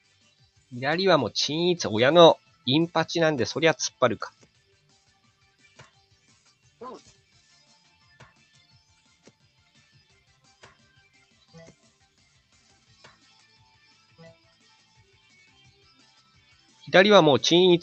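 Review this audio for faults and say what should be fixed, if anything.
The noise suppressor misjudged parts of the wanted sound as noise and pulled them down by about 9 to 11 dB, with the deepest cut near 4.3 s. This sound cut by the noise suppressor shows up at 4.32–5.10, 5.97–6.68, 7.06–7.88, 8.06–9.07, 9.24–10.29, 10.45–11.15, 12.53–14.20 and 14.44–16.83 s. Within each span, roughly 150 to 700 ms of steady or fading sound sink or lose their tails, while sharp onsets survive. To prevent it, lower the suppressor's aggressiveness or lower its noise-floor estimate so sustained content isn't classed as noise.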